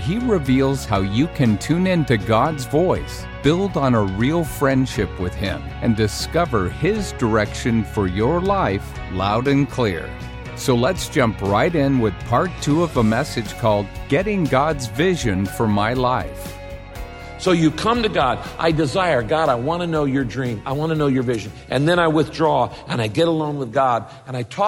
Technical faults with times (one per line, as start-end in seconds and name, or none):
none